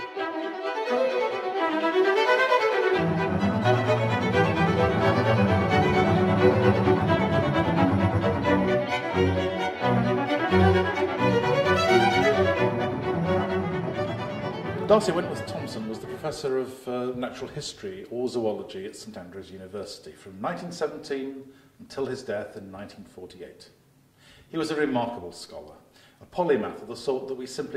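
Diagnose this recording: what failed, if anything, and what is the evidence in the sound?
Nothing failed here: no stage in the chain, from analogue wiring through conversion, processing and playback, leaves any audible fault in this recording. The sound holds steady across its whole run with no break, jump or change in character that would point to a problem anywhere along the path.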